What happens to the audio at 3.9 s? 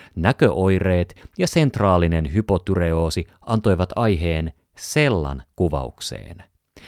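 At 3.9 s the audio sits inside a run of repeated timing corrections spanning 0.10 to 5.65 s. The receiver keeps repeating short slivers to stay in step, stretching the passage to 98% speed and adding about a tenth of a second overall. Each edit is small, so any hiccups or uneven pacing are slight. On a waveform or spectrogram, small duplicated segments appear at irregular spacing, each with a tiny discontinuity at its seam.

Those corrections come from clock drift between sender and receiver, present throughout the clip. The sender's clock runs roughly one and a half percent slow, so the jitter buffer keeps draining and must be padded. Across the whole clip the timeline looks subtly elongated, with the repeats scattered unevenly rather than on any regular grid.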